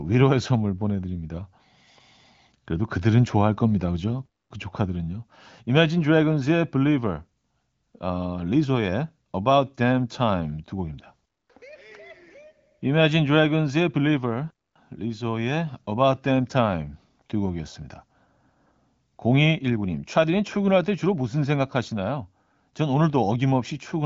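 250 ms silences break into the speech at 4.26 s and 14.51 s. This is a gap between chunks, with silence inserted at each 10-second join.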